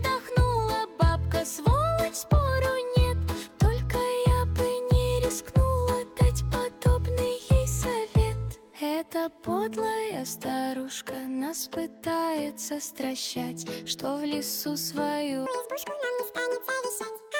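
From 15.46 s to the end at 17.39 s, the audio is read two samples at a time. It plays at double speed, an octave higher.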